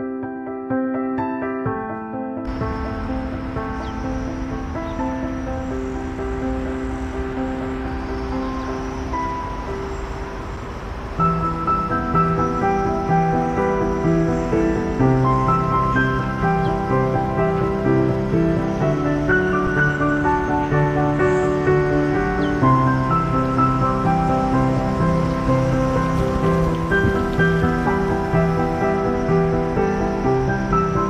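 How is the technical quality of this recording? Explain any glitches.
Two short dropouts mar the recording. Underrun with held sample, at 10.57 s and 19.67 s: each time the output buffer ran dry and the converter froze on its last value for about 5.3 ms, a length that fits a 256-sample buffer. The waveform sits flat, likely off zero, so the sound simply halts without a sharp click. Since essentially nothing was skipped and playback picks up where it paused, each restart is only a soft tick.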